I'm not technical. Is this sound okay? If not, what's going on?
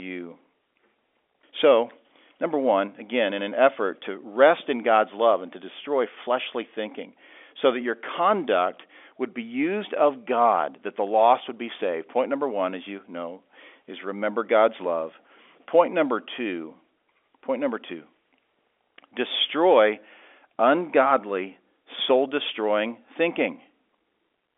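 Yes, it's fine: nothing here is going wrong, and the narrow, phone-like quality is just what ordinary G.711 telephone coding does, since a phone line carries nothing above about 3.7 kHz.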